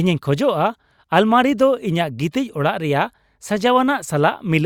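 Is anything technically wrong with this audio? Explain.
No, nothing in this speech recording stood out as technically wrong on listening.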